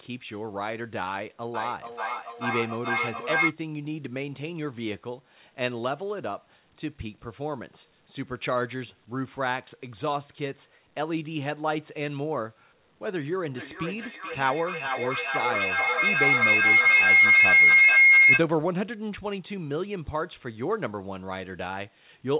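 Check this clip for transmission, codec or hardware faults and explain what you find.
Feedback howl occurs twice, and the whole clip stops at 4 kHz, which fits a narrowband call codec such as G.711.

Feedback howl, 1.54–3.58 s (about 3 dB above the speech) and 13.54–18.47 s (about 12 dB above): a microphone-to-loudspeaker loop gains on each pass. A tone near 2 kHz builds, pulsing roughly every 400 ms. Unlike echo, its repeats grow instead of fading.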